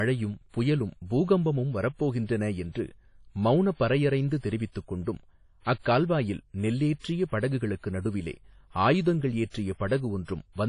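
WMA compression, throughout the speech: nothing reaches above 10.1 kHz, and the sound rings and turns washy, with a hiss that breathes along with the voice. The likely cause is a transform codec short of bits, fitting a bitrate near 32 kbps, which zeroes weak components and smears quantisation noise across long blocks.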